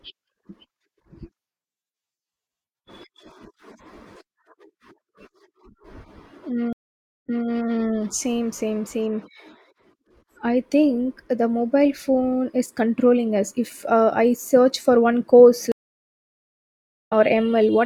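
Two stream reconnects break the speech. At 6.73 s a 0.53 s dropout ends with a fresh decoder restarting 0.21 s earlier, repeating material. After "search for one course" at 15.72 s, 1.34 s of silence gives way to audio about a second further on, skipping content.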